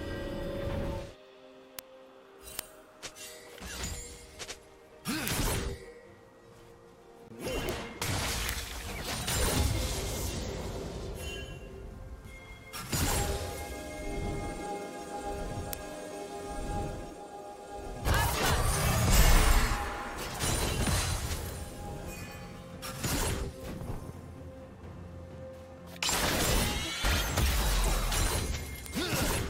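From 0.18 s to 29.4 s, word clock ticks arrive about every third of a second, around a hundred in total. The receiver's free-running clock drifts roughly 100 ppm from the sender's, slipping one sample each time. Their steady rhythm sets them apart from random clicks.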